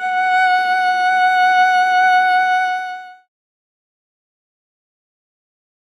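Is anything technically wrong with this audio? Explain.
No, nothing's wrong here: the music just eases out in a smooth fade that starts around 2 seconds and finishes by 3.29 s, the kind of gentle ending an editor would put on deliberately.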